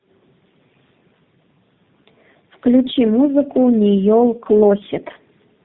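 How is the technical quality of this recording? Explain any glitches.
The quality is poor throughout because of tandem speech coding. The call passed through about three low-rate speech codecs in a row, each decoding and re-encoding the previous one's damaged output. The errors stack, leaving speech rough, muffled and warbly, with nothing above 3.8 kHz.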